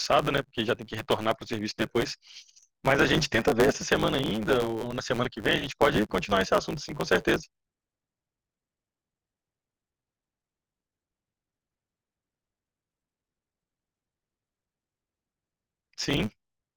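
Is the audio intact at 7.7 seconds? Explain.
No. At 7.7 seconds the speech carries a steady buzz at about 109 Hz and runs about 1.16 times too fast, as it does for the whole clip. This is a block size mismatch (truncated): one stage hands over longer blocks than the next stage reads, which fits 512-sample blocks being written, so the tail of each block is discarded. Those regular cuts produce the buzz and shorten the timeline.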